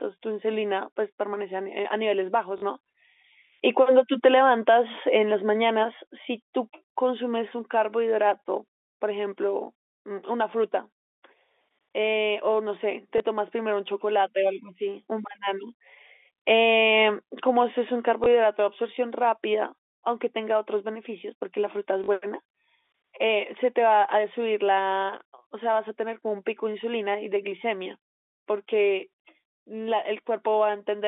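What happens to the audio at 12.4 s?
Nothing goes wrong at 12.4 s: the speech carries straight through that moment with no break, glitch or change, just the narrow telephone band of the G.711 line.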